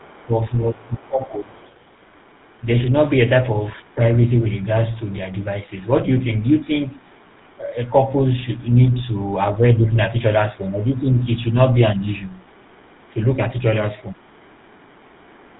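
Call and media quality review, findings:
GSM full-rate codec across the whole clip. Buzzy, gravelly roughness on the speech, plainly audible, with top end cut at 4 kHz. Regular-pulse excitation and coarse vocal-tract modelling, consistent with the 13 kbps GSM full-rate codec.

Speech suppressed in double talk, 0.0 to 1.6 s and 10.57 to 12.02 s. The talker dips and thins, by about 20 dB at the start and about 5 dB later. This is likely the echo canceller attenuating both directions while they overlap.

Other side's voice leaking through, 0.0 to 2.65 s, 3.78 to 4.66 s and 5.68 s to the end. A faint second voice sits under the speech, at about 30 to 35 dB below it. This is likely residual loudspeaker echo that the canceller did not remove.

GSM bit errors at 10.16 s. A short squawk and gargle in the decoded speech, pointing to a few corrupted frames on a weak radio link. Flipped filter, pitch or gain parameters distort the spectrum and level for that instant.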